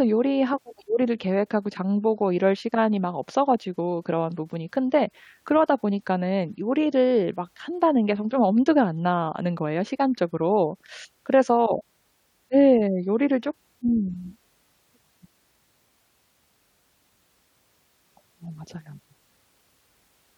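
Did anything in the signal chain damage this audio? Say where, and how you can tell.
Yes. Clock slip clicks from 0.68 to 20.15 s: faint regular ticks under a second apart, likely unsynchronised converter clocks about 40 ppm adrift, slipping single samples.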